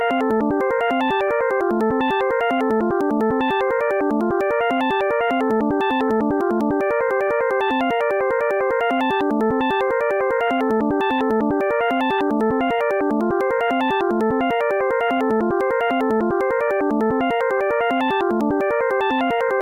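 No technical faults are audible anywhere in this recording.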